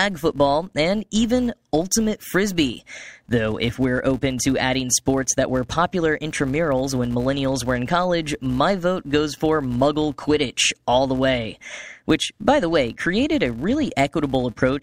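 A filter restarted on every block resets its state throughout, so each block starts with a transient, giving a 188 Hz buzz that follows the speech's level, which fits a 256-sample block.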